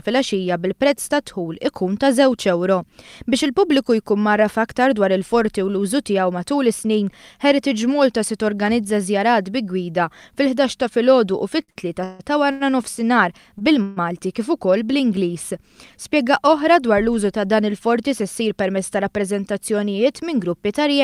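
Repeated stalls (stutter) run from 11.63 to 12.62 s. Packets kept reaching the receiver late, so its jitter buffer emptied four times. Each time the last sound was carried on, the longest hold being 156 ms, to fill 351 ms in all, about a third of that second. The audio drags and stutters, though nothing is lost.

A short stall from a late packet follows at 13.58 to 13.62 s. One packet was not ready when due. The receiver stretched the preceding sound by 20 ms until it arrived and then continued from the same point, leaving a sound held slightly too long.

A call audio freeze comes at 13.82 to 13.99 s. The sound hangs on as a 142 ms continuation that never drops to silence, then resumes where it left off. The likely cause is packets held up in transit that left the jitter buffer empty.

A jitter buffer speed-up spans 17.95 to 19.13 s. With more audio queued than its target, the receiver trimmed pitch-period-sized slices repeatedly, around 70 ms altogether. 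The audio runs at 105% speed with its pitch unchanged and sounds slightly hurried.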